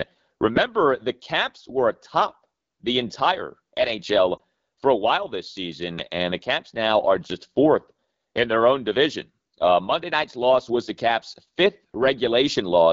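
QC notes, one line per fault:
Throughout: AMR wideband (HD Voice) codec. The speech has a plainly audible rough, raspy texture, and its top band has a hissy, synthetic quality. The codec models the voice up to 6.4 kHz using a vocal tract filter driven by sparse pulses, and it fills 6.4 to 7 kHz with shaped noise. The coarse quality points to one of the two lowest AMR-WB modes, which fits 8.85 kbit/s. At that rate the pulse excitation is too sparse to carry the voice cleanly.
4.37 to 4.41 s: Lost AMR speech frame. There is a brief dip or warble lasting a few tens of milliseconds, consistent with a single lost 20 ms frame. When a frame fails its checksum, the decoder substitutes the last good pitch and vocal tract settings at reduced gain. The sound therefore sags and wavers briefly instead of dropping out. Normal decoding picks up again right afterwards, with a momentary weak onset as the decoder state recovers.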